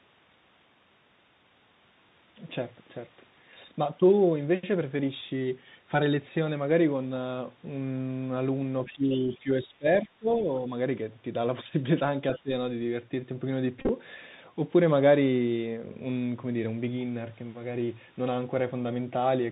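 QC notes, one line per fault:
throughout: Bluetooth CVSD headset codec. The 64 kbps one-bit delta coding caps the band at 4 kHz, and loud high sounds outrun the adaptive step, so sibilants turn scratchy and a granular hiss sits under the speech.
8.85–8.93 s, 9.09–9.38 s, 10.37–10.43 s, 12.34–12.41 s: other side's voice leaking through. Faint scraps of a second voice, about 20 to 25 dB below the talker, likely from loudspeaker echo the canceller missed.
8.93–9.87 s, 10.03–10.47 s, 12.43–12.51 s: speech suppressed in double talk. The talker dips by roughly 15 to 25 dB in pieces, likely from the echo canceller ducking both voices at once.
13.79–13.89 s: Bluetooth headset packet repeated. About 64 ms of audio scattered across 0.1 s, with runs up to about 30 ms, is replaced by re-decoded packets, giving a brief buzz near 267 Hz.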